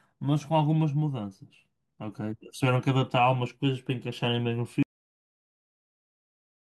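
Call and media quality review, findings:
Cut-off end at 4.83 s. Speech stops abruptly mid-sound, straight into digital silence to the end, with no decay tail. Probable component: capture or playback buffer handling at stream close. Mechanism: final buffers never written out, so the waveform ends where the last delivered buffer did. Silence fills the final 1.85 s.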